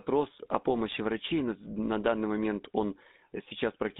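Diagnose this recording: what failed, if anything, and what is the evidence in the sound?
The codec stage failed: GSM full-rate coding is audible across the whole clip as a buzzy, gravelly roughness in the speech. The passband runs from about 200 Hz to 3.7 kHz, which fits a 13 kbps full-rate stream. On a spectrogram, energy stops sharply above 3.7 kHz, and the harmonics look smeared and grainy rather than cleanly striped. That texture comes from the coarse pulse excitation, which keeps only every third sample, driving a vocal-tract filter.

GSM bit errors, a network-stage fault on the radio link, hit from 0.90 to 0.99 s, just before "врачей но на данный". That 86 ms burst fits about four corrupted 20 ms frames, at an error rate of roughly 2%. Flipped bits in the filter, pitch and gain values make the decoder squawk and gargle. A waveform shows abrupt level jumps in the burst, and a spectrogram shows blocky, frame-wide spectral distortions that break the harmonic pattern.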